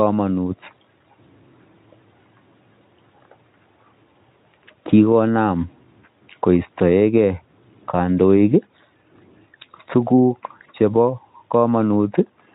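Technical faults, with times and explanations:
No faults found; the speech has gone through a Speex speech codec at a setting generous enough that its trace is faint at most.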